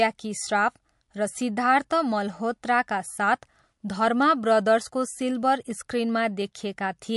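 Speech with clearly audible MP3 compression throughout: watery, swirly texture and nothing above 11.3 kHz, likely from a low bitrate around 50 kbps.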